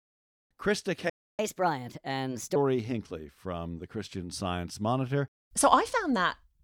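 At 1.10 s the speech cuts off mid-flow and the output goes silent until 1.39 s, a playback stall lasting about 0.29 s. The likely cause is the player running out of buffered data or its thread being blocked. What separates this from a dropout or packet loss is that nothing is skipped. The sound resumes exactly where it broke off, so the silence is inserted into the stream rather than replacing part of it.

From 1.39 s to 2.56 s comes catch-up at higher speed. The player works through its backlog at 1.25 times normal rate by resampling, so tempo and pitch rise together, with the pitch lifted by roughly four semitones. That coupling, and the return to normal speed and pitch once the lost time is recovered, distinguish it from a deliberate pitch shift or time-stretch, which would change only one.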